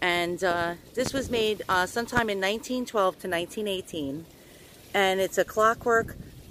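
Two sharp loud pops, from 1.06 to 1.09 s and 2.17 to 2.20 s, jump around 15 dB above the surrounding audio, which continues underneath. Each is likely a sudden electrical voltage spike, such as static or a switch, shaped briefly by the following circuitry.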